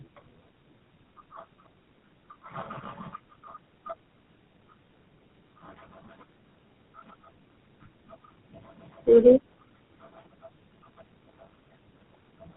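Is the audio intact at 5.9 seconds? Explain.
No. At 5.9 s, as throughout, tandem speech coding is audible: four speech coders in series, ending in GSM full rate, stack their damage, leaving speech rough, muffled and warbly with nothing above 3.9 kHz.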